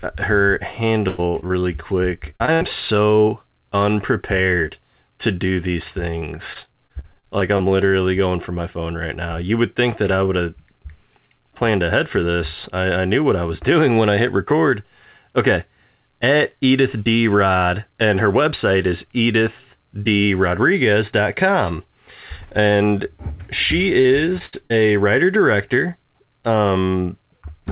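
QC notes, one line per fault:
1.08–1.64 s, 2.30–2.66 s (just before "so unprepared to do"), 6.19–7.62 s (between "unprepared to do these" and "literally going for my"), 24.01–24.72 s (before "writer director"): repeated packet loss (robotic sound). Four to nine short holes per stretch, up to 100 ms each, are patched by repeating the last sound, so the band-limited, sub-4 kHz call audio turns choppy with pieces missing. The quick succession of patched holes sets it apart from a single clean dropout.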